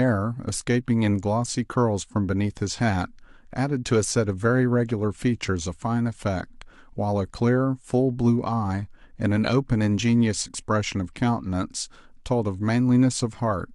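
No technical faults can be heard anywhere in the speech recording.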